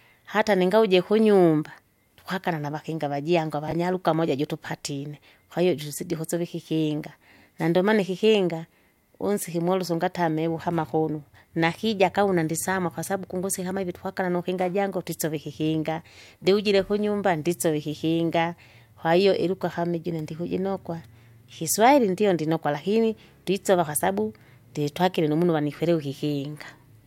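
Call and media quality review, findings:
Brief garbled blip, 3.68 to 3.72 s. Chunks out of order: one 10 ms block played three blocks late, after the audio meant to follow it. No audio lost, only the sequence is wrong. Probable component: receive-side reordering or buffer write path, releasing the late block instead of slotting it back in place. Three hard joins result, around a jumbled 40 ms stretch.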